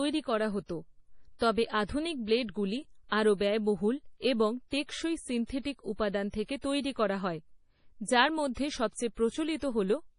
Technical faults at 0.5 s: MP3 compression

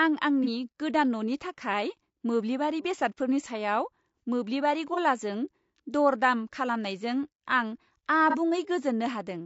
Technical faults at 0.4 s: low-delay AAC compression; AAC frame loss with concealment

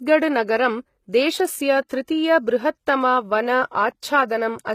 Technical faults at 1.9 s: HE-AAC compression; pre-echo

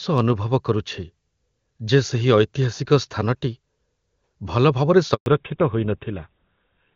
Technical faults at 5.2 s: handover gap; fallback to narrowband

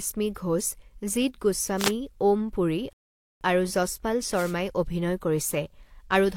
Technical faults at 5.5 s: none

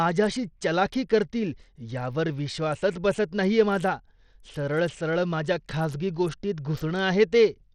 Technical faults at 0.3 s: Bluetooth SBC compression

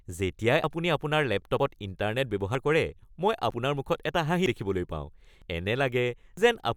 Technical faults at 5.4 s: audio missing between chunks

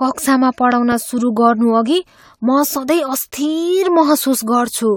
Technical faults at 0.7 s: generation loss; loud pop

